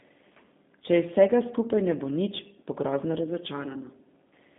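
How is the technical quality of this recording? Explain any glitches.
The technical quality is limited by one fault that runs through the whole speech clip: G.729 codec damage, and it is plainly audible. The voice is carried in a narrow telephone band of roughly 150 Hz to 3.6 kHz, with nothing at all above 3.7 kHz. Instead of keeping the waveform itself, the codec resynthesises the speech each frame from a vocal tract filter, a pitch predictor and a sparse set of pulses, which fits G.729A at 8 kbit/s. That rebuilding gives the voice a slightly rough, synthetic buzz and removes the air of sibilants. On a spectrogram, energy stops at a hard ceiling near 3.7 kHz with empty space above, and the low end thins below 150 Hz. In the waveform, the shape looks smoothed and regularised rather than finely detailed.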